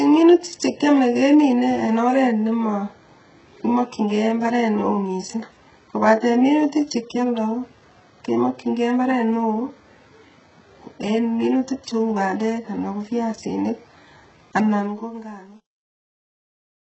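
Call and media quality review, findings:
HE-AAC compression, throughout: heavy damage, nothing above 8 kHz, gritty lispy sibilance; likely band-replicated treble copied up from lower bands, consistent with a very low bitrate near 8 kbps.

Truncation distortion on a fade, 14.71 to 16.99 s: the fade-out from about 14.7 s turns gritty, worst from 15.16 s onward; an undithered gain stage keeping about 9 bits.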